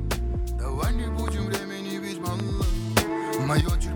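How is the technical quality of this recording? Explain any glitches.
The recording has three technical faults: two loud pops and one sudden gain jump.

Loud pops, 1.28 to 1.30 s and 2.40 to 2.42 s: a brief voltage pulse, likely from a switch, static discharge or driver glitch, entered the signal path. Each lands as a single sharp pop over the continuing sound, the first peaking roughly 15 dB above it, the second roughly 10 dB.

Sudden gain jump, 2.97 to 3.61 s: the digital gain, likely a setting applied without a ramp, stepped up by 8 dB between one sample and the next. The sound and its background noise both leap louder at once, then drop back at 3.61 s.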